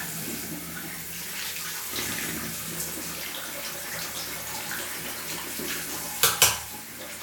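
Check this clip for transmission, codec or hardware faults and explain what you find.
Nothing stands out here: the sounds in the clip come across without any transmission, codec or hardware trouble to point to.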